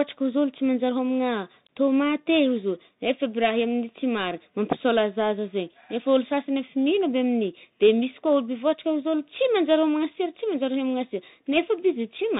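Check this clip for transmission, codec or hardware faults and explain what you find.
There is one fault, and it runs through the whole clip. Bluetooth CVSD headset codec, throughout: each sample is coded as a single up-or-down bit with an adapting step, which fits a 64 kbps link. The speech is cut off above 4 kHz, s sounds turn scratchy, loud high sounds distort, and a granular hiss sits underneath.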